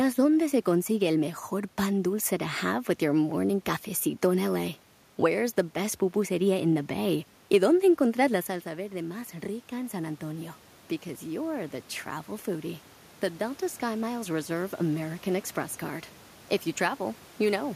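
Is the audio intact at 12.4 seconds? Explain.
No. At 12.4 s the automatic gain rising is underway (11.2 to 15.27 s): after the input dropped about 12 dB, gain climbs about 4 dB. Voice and room noise swell together, unlike a talker moving closer.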